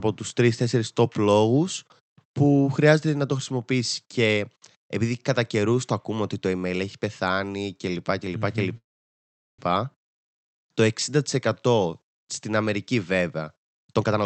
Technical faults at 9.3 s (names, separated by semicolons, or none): call audio freeze